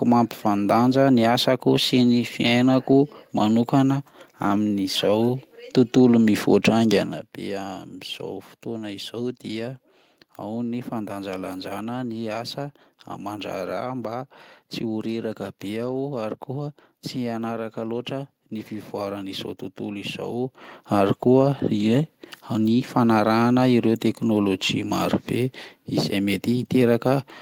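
Nothing technically wrong turns up in this speech recording, so there's nothing to flag here.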